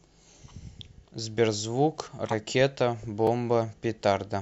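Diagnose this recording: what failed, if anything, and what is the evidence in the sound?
At the codec stage, a compressed frame reached the decoder with flipped bits and was played anyway. From 2.26 to 2.33 s, corrupt frame decoding misreads gain and spectral codes across what sounds like two consecutive frames. Energy lands at frequencies the speech never had, so the damaged stretch comes out as a brief chirping, noisy burst that stops once the decoder reaches clean frames.

In the driver or buffer stage, a block of digital silence appears at 3.27 s. The output buffer was likely not filled in time and a run of zeros went out instead. The hole lasts about 2.9 ms, which fits a 128-sample buffer. The signal drops straight to silence and returns without a fade. Those two hard edges merge into a single tick in the speech.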